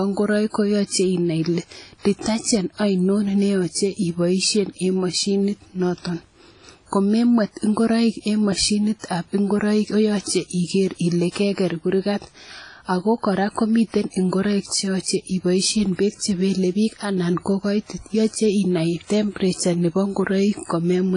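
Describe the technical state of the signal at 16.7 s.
At 16.7 s the speech carries heavy codec damage that runs through the whole clip, likely WMA compression at a low bitrate, fitting around 24 kbps. Coarse transform quantisation smears noise in time and drops weak detail, so it rings and sounds washy, with nothing above 10.1 kHz.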